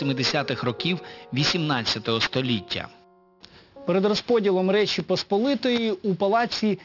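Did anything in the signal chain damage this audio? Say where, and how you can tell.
Yes. Aliasing runs throughout the clip and comes from sample-rate conversion. High content sounds gritty and metallic, and a spectrogram shows energy packed hard against 6 kHz with mirrored, unrelated lines. This fits a downsample to 12 kHz without anti-alias filtering, folding strong components back only about 10 dB down.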